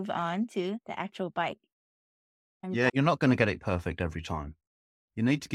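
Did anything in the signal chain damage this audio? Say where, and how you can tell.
No, nothing in the chain damaged this audio.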